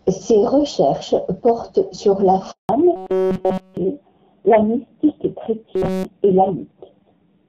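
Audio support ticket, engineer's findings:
Handover gap at 2.51 to 2.69 s: sound collapses within a few tens of milliseconds, then 180 ms of dead silence until the new link starts; audio from that stretch is lost. Unlike a jitter-buffer dropout, no comfort noise or repeats fill it, and the audio that comes back is narrowband, which points to a network switch rather than packet loss on one link.

Fallback to narrowband from 2.69 s to end: nothing above 4 kHz, sound duller and rougher. Before the switch, audio is clear wideband with content up to about 7 kHz, consistent with AMR-WB around 12.65 kbit/s. The step change at the handover and the fixed 4 kHz ceiling suggest a codec renegotiation to AMR-NB, the roughness fitting a low rate near 5.9 kbit/s. A gradual bitrate drop within one codec would not lower the band edge.

Robotic buzz at 2.96 to 3.77 s and 5.74 to 6.05 s: rigid metallic tone at 188 Hz that still follows the speech contour, with essentially all of the audio replaced by repeats. 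Likely cause: starved playout repeating a short buffer of about 5.3 ms. Unlike low-rate codec rasp, the buzz sits at a fixed 188 Hz set by the buffer length.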